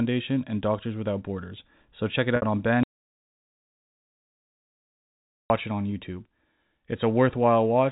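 At 2.36 s, just after "check it", packet loss with pitch repetition fills about 60 ms (which fits three 20 ms packets) with a briefly held, buzzy repeat of the last pitch period rather than a silent gap. From 2.83 s to 5.5 s an audio dropout to silence, likely from a lost input, cuts the sound off mid-flow for 2.67 s. The gap is silent with no room tone and no fade, unlike concealment, and the sound resumes abruptly at "it on".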